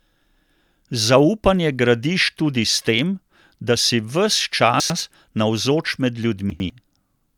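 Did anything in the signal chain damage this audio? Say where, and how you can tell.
Yes. Jumbled moments at 4.8–5.0 s and 6.5–6.7 s come from buffer-stage chunks out of order, each 100 ms chunk playing one slot late.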